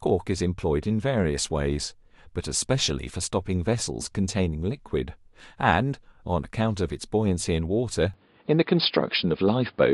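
At 8.14 s the speech abruptly turns duller and narrower, and stays that way to the end of the clip, about 10 s in. The likely cause is an input switched to a poorer device partway through the recording. The new path carries nothing above 5 kHz, shifts the level by roughly 5 dB, and brings its own faint noise floor, around 40 dB under the speech. There is no gap at the switch. On a spectrogram the upper band is cut off sharply at 8.14 s, and the waveform envelope steps in level at the same point.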